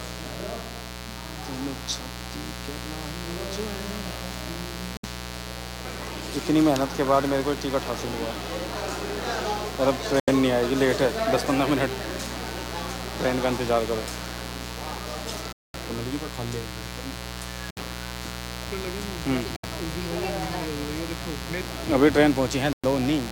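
A switching spike on the power line, probably from a dimmer, rectifier or unshielded cable, enters twice in every 60 Hz cycle, so the audio carries a raspy mains buzz throughout, its harmonics reaching into the kilohertz range and sitting only about 10 dB below the wanted sound. The playback also drops out in short gaps at 4.97, 10.20, 15.53, 17.71, 19.56 and 22.73 s, mostly about 65 to 110 ms of silence but 216 ms at 15.53 s. Each gap ends with the sound resuming. These are likely Bluetooth stalls, where interference delayed packets until the headphone buffer emptied.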